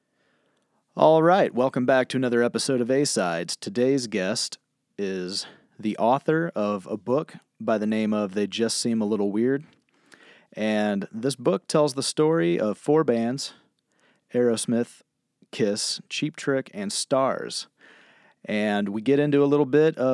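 No technical faults are audible anywhere in the speech recording, and the signal holds steady throughout.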